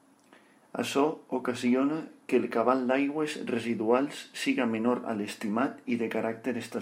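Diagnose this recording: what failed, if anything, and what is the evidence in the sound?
Nothing stood out on listening to this speech recording that would point to a failure at any stage of the chain.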